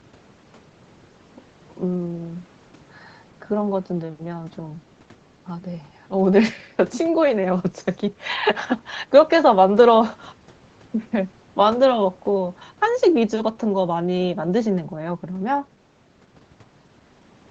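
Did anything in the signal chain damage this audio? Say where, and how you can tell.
No, nothing in the signal chain has damaged this speech. The audio stops at 8 kHz, which is the normal band limit of the call microphone processing and the Opus call path it went through.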